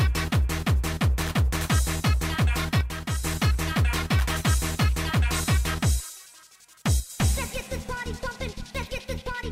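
One channel drops out at 2.81 to 3.24 s and again at 7.00 to 7.10 s, where the sound abruptly falls about 6 dB and then recovers. The likely cause is one stereo channel going silent, so the mono sum loses half its shared content.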